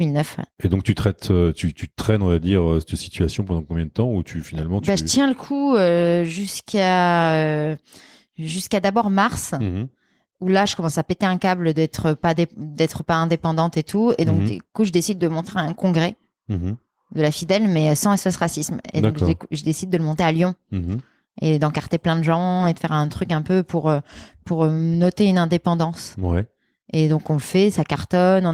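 Nothing in this recording of speech stands out as a technical fault, so there's no moment worth pointing to here.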